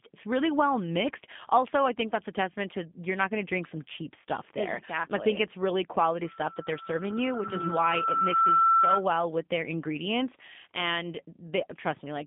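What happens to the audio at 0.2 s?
At 0.2 s the speech is already carrying G.729 codec damage, which runs through the whole clip. Rebuilt from a vocal tract filter, pitch predictor and sparse pulses, it sounds rough and synthetic. A spectrogram shows energy confined to about 150 Hz–3.6 kHz, which fits an 8 kbit/s voice line.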